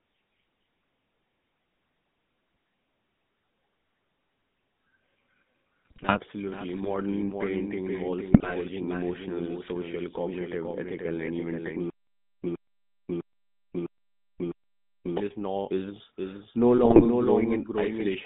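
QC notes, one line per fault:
Throughout: doubled audio track. A second full-band copy of the speech trails the original by about half a second, roughly 5 dB down, with no reverb tail or room colour on it. That dry, clean repeat points to the signal likely being picked up twice, once through a slower path, so everything lands as a crisp echo rather than a room reflection.
Throughout: GSM full-rate codec. The whole clip has that buzzy, gravelly phone texture, and the damage is plainly audible. The band sits at about 150 Hz to 3.7 kHz, so there's nothing up top and little body down low. The codec rebuilds the voice from a vocal-tract model driven by a sparse, regularly spaced pulse excitation, and that coarse excitation is where the rasp comes from. It fits the 13 kbps full-rate coder.
5.85 to 6.20 s, 8.30 to 8.53 s, 16.78 to 17.07 s: GSM bit errors. Three short bursts where the voice squawks, pops and gargles. 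The second falls right after "parenting involves" and before "emotional social cognitive ethical", and the third right after "is no". Corrupted filter, pitch and gain values reach the decoder, which warps the spectrum or spikes the level frame after frame while each burst lasts. That's typical of a marginal radio link with errors of around 2 percent.
11.9 to 15.17 s: stutter with silent gaps. Right after "cognitive ethical and even", a roughly 116 ms fragment repeats five times, each followed by about 538 ms of dead digital silence, so it pulses every 654 ms until "is no" picks up. This is likely a stalled stream or player replaying its last buffer on each retry and then running dry. Whatever should have played in those three-odd seconds is simply gone.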